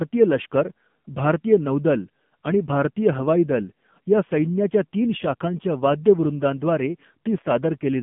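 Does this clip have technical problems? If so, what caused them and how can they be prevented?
Yes. Throughout, the speech sounds buzzy, synthetic and boxy, confined to roughly 150 Hz to 3.5 kHz: AMR narrowband mobile codec damage, consistent with a low bitrate near 7.4 kbps. Prevent it by routing calls through a wideband codec or a higher-bitrate AMR mode.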